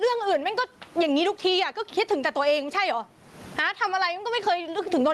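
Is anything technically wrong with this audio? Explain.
Yes, there's gain pumping through the whole clip. The room's background noise sits about 39 dB under the speech, and the gain swings by roughly 20 dB, so everything sounds squashed. That's likely mic gain set far too high, with a fast limiter clamping down on each peak.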